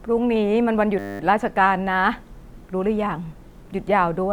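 At 0.99 s the speech freezes into a system hang loop that runs until 1.2 s. The machine or its audio driver stalled, and the sound hardware kept replaying the same 10 ms slice of its ring buffer, about 21 times over. Because the slice is so short, it repeats 100 times a second, so you hear a flat, steady buzz at 100 Hz instead of a stutter. Once it releases, the speech picks up with hardly anything missing.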